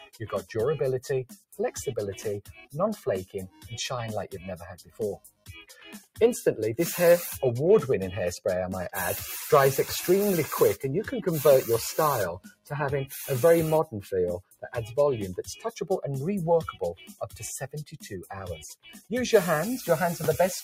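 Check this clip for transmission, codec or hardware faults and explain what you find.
A speech-tuned noise suppressor is processing this audio, which is a processing fault rather than a transmission or hardware one.

Noise suppressor applied to music or sounds: throughout, sustained content is treated as noise. Gain swings by about 10 dB, and a waveform envelope visibly pumps as held parts sink.

Sound cut by the noise suppressor: at 0.0–0.52, 1.29–1.59, 2.42–3.7, 4.34–6.19, 12.4–12.71, 14.03–14.68 and 16.73–19.11 s, steady or decaying sound is pulled down by up to about 20 dB. Attacks survive while tails vanish, leaving dark, gappy patches on a spectrogram.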